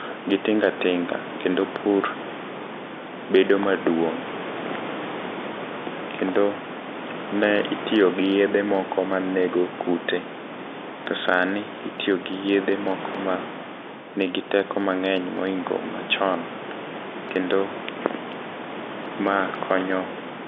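No technical faults can be heard anywhere in this speech recording. Room noise sits about 12 dB below the speech, and the telephone coding limits the sound to a narrow line band of roughly 200 Hz to 3.6 kHz, consistent with G.711 at 64 kbps.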